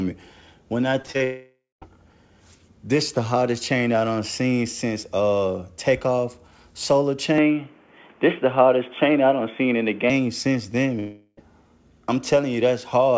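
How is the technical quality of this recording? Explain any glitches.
The recording has clear network and input problems. It travels over a wideband call path whose band stops at 8 kHz, which fits a codec such as G.722.

From 1.02 to 1.22 s there is repeated packet loss, which produces a robotic sound. Packets went missing in quick succession, with the longest gap about 22 ms. The receiver filled each hole by extending the previous sound, so about 41% of this span is patched. The result is choppy and robotic.

Right after that, from 1.24 to 1.84 s, comes what is likely a long network dropout. About 0.58 s of audio never arrived. The concealment stretches the last sound into a fading buzz or hiss, and the final 0.19 s is silent before the audio resumes with that part missing.

What is likely a second long network dropout hits from 11.0 to 11.39 s. This time roughly 0.38 s is lost, and it is almost entirely covered by a synthetic fade-out with only 10 ms of true silence. 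The sound smears and then jumps ahead.

From 7.38 to 10.10 s the input likely switched to a poorer device, with no gap at the changeover. The new input passes nothing above 3.5 kHz, so the sound turns dull and boxy. The level shifts by around 5 dB, and a fresh noise floor sits roughly 35 dB below the signal until the original input returns.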